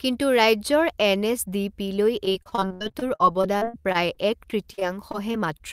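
From 2.25 to 5.61 s the speech breaks up with repeated packet loss (robotic sound): 27 gaps, the longest 67 ms, each patched by stretching earlier sound, so it turns choppy with pieces missing.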